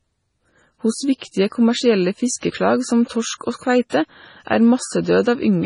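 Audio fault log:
throughout, MP3 compression: the speech sounds watery and swirly, with metallic chirping on s sounds and softened, smeared consonant attacks, and nothing is heard above 10.5 kHz. This is likely heavy MP3 coding, consistent with a very low bitrate around 24 kbps: the encoder, short of bits, cuts the treble at a fixed point and drops weaker frequency lines, which flicker on and off between frames and leave the burbling texture.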